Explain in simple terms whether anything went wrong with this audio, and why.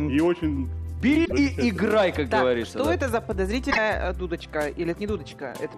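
Two brief glitches break into the sound, from 1.22 to 1.33 s and again from 3.67 to 3.78 s. This is damaged data in a compressed stream: part of the file was corrupted, so the player misread those chunks and had to find its footing again.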